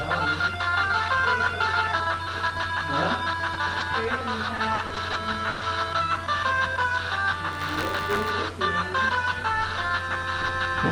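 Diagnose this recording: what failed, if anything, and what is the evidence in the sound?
Network stage, short concealed packet loss: at 3.53–3.57 s, 20 ms of audio went missing and the decoder filled the gap by extending the preceding sound. A waveform shows a brief smeared patch. A spectrogram shows the preceding sound stretched flat for one frame before the real audio resumes.

Network stage, lost packet rebuilt from error correction: at 3.80–3.82 s, one 20 ms frame was replaced by the low-bitrate redundant copy carried in the next Opus packet. There is no gap, only a rougher, noisier frame.

Network stage, repeated packet loss (robotic sound): from 4.28 to 5.63 s, six separate gaps removed about 240 ms of audio, the longest 120 ms. Concealment repeated the last sound in each gap, and error correction rebuilt part of the stretch. The result is choppy. A spectrogram shows repeated flat, smeared blocks.

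Driver or buffer stage, buffer tearing: from 7.51 to 8.32 s, a steady 93.8 Hz robotic buzz is heard, which fits a 512-sample buffer at 48 kHz. The writer and reader of the ring buffer had slipped, so each period contains a small slice of audio about 20 ms old, joined hard on both sides. A waveform shows evenly spaced step discontinuities, and a spectrogram shows vertical streaks at the buffer rate.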